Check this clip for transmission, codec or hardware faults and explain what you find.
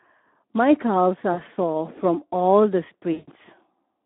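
Two faults are present: Speex codec damage throughout, and two bursts of VoIP packet loss concealed by the speech codec.

Speex codec, whole clip: sparse CELP excitation makes the speech hoarse and noisy, fitting roughly 11 kbps. The band runs from 250 Hz to 3.6 kHz.

VoIP packet loss concealed by the speech codec, 1.33 to 1.40 s and 3.13 to 3.30 s: the decoder extends its last pitch and filter into a fading buzzy tone or coloured noise. The first gap is 40 ms and the second 140 ms, which fits two and seven 20 ms frames.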